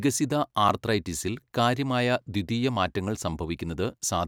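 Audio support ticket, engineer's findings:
Block of digital silence at 3.15 s, speech clip. Roughly 2 ms dropout, heard as a single tick rather than a hole. Hard cut to zero and back, no fade. Probably the output buffer not filled in time; worth checking render-thread scheduling.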